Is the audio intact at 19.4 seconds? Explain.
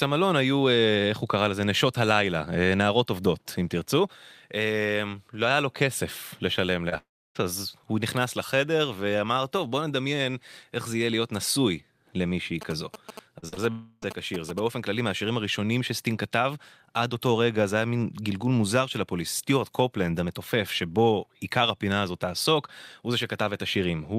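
Yes, the speech at 19.4 seconds plays through intact, with no dropout, click, distortion or other audible fault at that moment.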